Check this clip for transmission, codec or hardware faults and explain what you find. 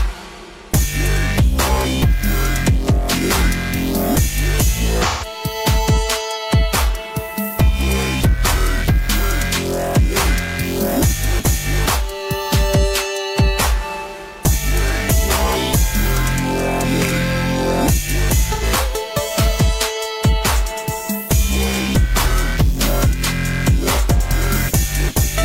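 There's one problem, AAC frame loss with concealment, at 5.02–5.25 s and 18.52–18.63 s. The decoder patches roughly 128 ms and 85 ms of missing frames from the last good spectrum, leaving brief smeared, noisy patches.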